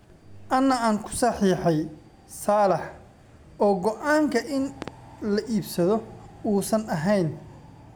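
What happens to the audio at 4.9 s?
A loud pop, heard as two sharp pops in quick succession, lands between 4.82 and 4.90 s and peaks about 10 dB above the speech, which continues underneath without interruption. The likely cause is a brief voltage step or pulse, from a plug, a switch, static discharge or a driver glitch, entering the signal path. The circuits downstream shape that pulse into a short double transient.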